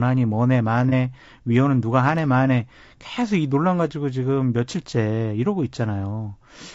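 From the start and through the whole clip the speech sounds rough and grainy, with noise filling the gaps between harmonics and a thin, synthetic top band. That points to low-delay AAC compression, likely AAC-ELD at a low rate around 32 kbps. Its short frames can't resolve pitch harmonics cleanly, so the damage sits inside the voice's harmonic structure rather than appearing as a clean high-frequency cut-off, which is what separates it from simple band-limiting.

At about 0.89 to 0.93 s there is a brief smeared, noisy patch where the sound loses definition without dropping out. That is AAC frame loss with concealment. One frame's worth of audio, roughly 30 ms, went missing, and the decoder filled it from the preceding spectrum with randomised detail. Because the gap is patched rather than left silent or cut abruptly, it comes across as a blurred smudge, not a hard dropout or a click.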